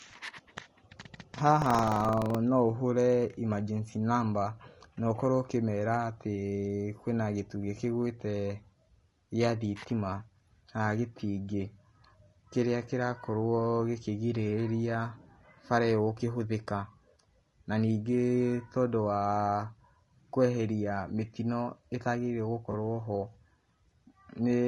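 Across the whole speech clip there is a rough, grainy quality, with noise filling the gaps between harmonics and a thin, synthetic-sounding top band. That points to low-delay AAC compression, likely AAC-ELD at a rate around 32 kbps. Its short frames smear pitch detail, unlike ordinary AAC, which keeps voiced tones cleaner.

From 1.58 to 2.38 s a mechanical buzz of about 23.4 Hz rides on the speech, which fits buffer tearing with a 2048-sample buffer. In each period a small slice, roughly a twentieth, replays audio from about 150 ms earlier, with hard joins on both sides. The steady rate, heard only while sound is present, separates it from random dropouts.

At 22.71 to 22.74 s there is a brief smeared patch, about 20 ms, consistent with AAC frame loss with concealment of a single frame. The decoder rebuilt the gap from the previous spectrum. Because the loss is so short, the sound smears rather than fading to a faint noise floor.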